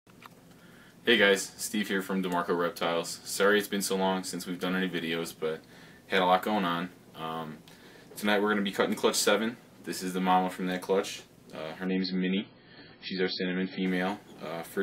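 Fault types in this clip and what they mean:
Adaptive stream at a lower bitrate: The player switched to a cheaper version of the stream for a stretch, likely because the connection slowed. From 11.86 s to 13.86 s the treble vanishes, with nothing above 5.6 kHz, and coding artefacts rise. The sound turns dull and swirly. The change is abrupt both ways, with no gap. This points to a fall from 128 kbit/s MP3 to about 16 kbit/s.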